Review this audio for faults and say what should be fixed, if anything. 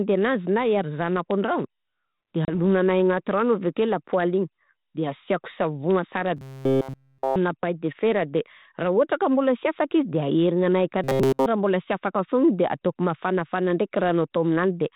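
Packet loss on the ADPCM call occurs around 2.45 to 2.55 s. About 30 ms of audio drops out as a few packets of hard-edged silence. The decoder's predictor and step size then no longer match the sender's, so the sound returns with brief distortion. A waveform shows a flat gap with square edges, and a spectrogram shows a blank vertical band. Fix it with packet-loss concealment and a decoder state reset or resync after gaps.

Robotic sound from repeated short buffers occurs at 6.37 to 7.36 s, ending just before "paille de", and at 11.04 to 11.46 s, just after "afaka izy de aherignanahy". Throughout both stretches, the sound becomes a rigid metallic buzz at 133 Hz. That fits a chunk of about 7.5 ms being replayed, likely because audio arrived too late. A spectrogram shows evenly spaced horizontal harmonics at multiples of 133 Hz, and a waveform shows an identical short cycle tiled over and over. 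Enlarge the jitter buffer and use proper concealment instead of looping the last buffer.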